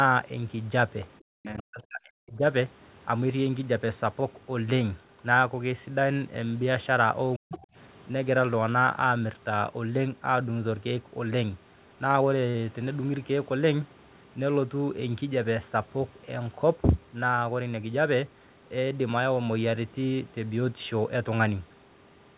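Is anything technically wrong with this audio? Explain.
Yes. From 1.22 to 2.42 s and 7.36 to 7.64 s, the speech dips by up to roughly 40 dB. This is likely speech suppressed in double talk, with the echo canceller turning the talker down while both sides spoke.

At 1.58 to 1.62 s and 7.53 to 7.58 s, brief scraps of the other side's voice leak through. These sit about 30 dB and 15 dB below the speech. The echo canceller likely left some loudspeaker sound in the microphone.

From 12.50 to 12.56 s, a 40 ms gap was lost and filled in, heard as a short smear. This is short concealed packet loss, patched by extending the preceding sound.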